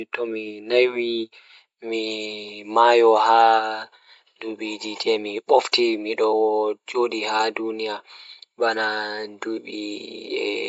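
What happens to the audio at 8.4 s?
Nothing goes wrong at 8.4 s: the speech carries on cleanly through that moment with no dropout, click, glitch or other fault.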